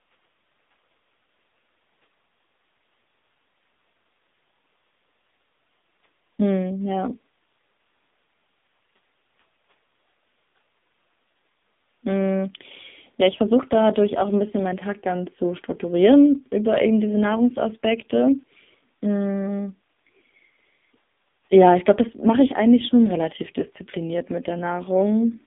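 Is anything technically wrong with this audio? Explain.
Yes. AMR narrowband mobile codec damage runs through the whole speech clip. The sound is confined to a telephone band of roughly 200 Hz to 3.7 kHz, with nothing above that, so it sounds thin and muffled. The codec rebuilds speech from a vocal-tract model excited by a few pulses per short subframe. The damage here is heavy, giving a buzzy, synthetic, hollow quality that points to one of the lowest AMR-NB modes, about 5.9 kbps.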